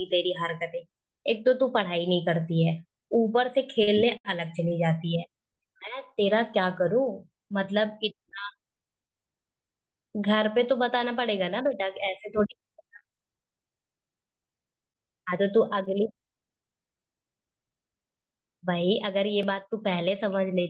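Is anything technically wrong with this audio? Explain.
Yes, there are two network timing faults, heard through a call codec whose top end stops near 12 kHz, which fits Opus at around 32 kbps.

Between 3.84 and 4.72 s there are repeated stalls (stutter). Packets arrived late, the jitter buffer ran dry three times, and the receiver stretched the last sound for 123 ms in total, the longest hold 72 ms. Nothing is lost, so unlike dropouts the sound drags and stutters.

From 12.59 to 15.88 s there are scattered short gaps, about seven isolated losses of up to roughly 20 ms, patched by continuing the preceding sound. Here 120 ms is actually missing, heard as brief ticks and smears rather than a drag.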